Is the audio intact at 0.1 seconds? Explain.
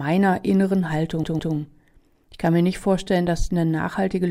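Yes, the speech at 0.1 s plays through intact, with no dropout, click, distortion or other fault at that moment.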